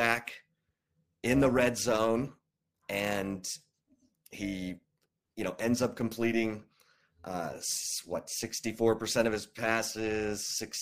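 Throughout the speech, frames were windowed and overlap-added with a window overlap that does not sum to constant gain, producing overlap-add ripple. The level swings by about 6 dB at roughly 300 Hz, heard as a metallic buzz with extra tones around each note.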